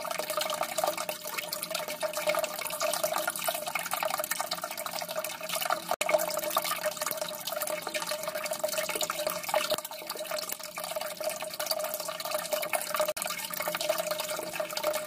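At 5.94 to 6.01 s and 13.12 to 13.17 s, the sound drops to silence for about 70 ms and 46 ms, then resumes further along. This is likely a Bluetooth dropout: late wireless packets were discarded, and the gaps fit three and two lost packets.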